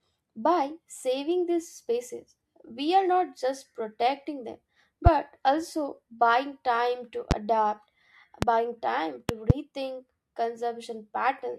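Loud pops occur at 5.06 to 5.09 s, 7.31 to 7.34 s and 8.42 to 8.45 s, each a single sharp pop, then at 9.29 to 9.53 s as two pops in quick succession. Each stands out roughly 20 dB above the speech, which continues underneath. The cause is likely a sudden voltage step or pulse, from a plug, switch, static discharge or driver glitch, entering the signal path and being shaped into a brief thump by the circuits that follow.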